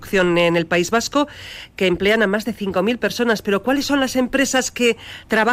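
No audible technical faults.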